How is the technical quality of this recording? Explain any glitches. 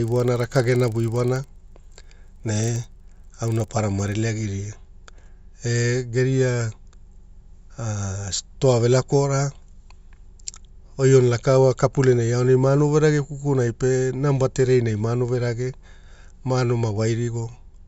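The recording has one clear glitch, confined to its opening. From 0.0 to 4.16 s the speech carries a 25 Hz buzz, a rapid ticking that sounds only under signal. This is a resampler restarted on every block: each 40 ms block was converted separately during an upsampling from 16 kHz to 48 kHz, leaving a small error at every block edge.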